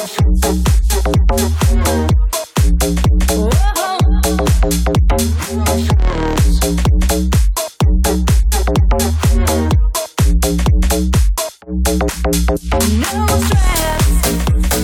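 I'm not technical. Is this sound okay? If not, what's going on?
Yes, no faults heard.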